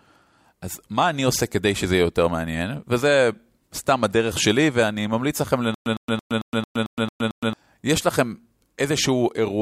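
Stutter with silent gaps runs from 5.74 s to 7.53 s in this speech clip. A burst of about 107 ms repeats eight times, each followed by roughly 117 ms of dead digital silence, giving an even cycle of about 224 ms. The likely cause is a stalled player or stream that replayed its last buffered fragment on each retry, then ran dry. The speech that belonged in that stretch never plays.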